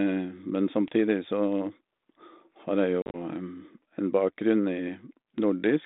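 From 3.02 to 3.16 s, packet loss on the ADPCM call drops roughly ten packets, 90 ms scattered over 120 ms, longest run 40 ms. Silence fills the holes and the G.726 decoder's predictor and step size lose sync, so speech resumes abruptly, slightly distorted.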